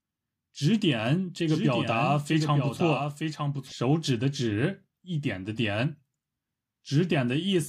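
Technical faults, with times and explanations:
1.48–3.72 s, doubled audio track: a second copy, about 5 dB quieter, trails roughly a second behind with no decay, likely from a slower capture path.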